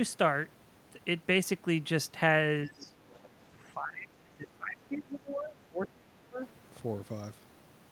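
Between 2.66 and 2.97 s, the echo canceller, likely caught with both ends talking at once, treats the talker as echo and pulls the speech down by roughly 20 dB for about 0.3 s, so the voice sags and thins. Inside that dip, from 2.79 to 2.86 s, the other side's voice leaking through appears as a faint scrap roughly 25 dB below the speech, probably loudspeaker sound the canceller failed to subtract from the microphone. A second, fainter fragment of that leakage follows from 3.09 to 3.27 s, about 30 dB down, and brief. Then, from 3.39 to 6.4 s, speech suppressed in double talk returns for about 3 s. This is most likely the same confusion between the local talker and the far-end echo. The talker is pushed down by up to about 25 dB, so the voice drops away and comes back unevenly across the whole stretch.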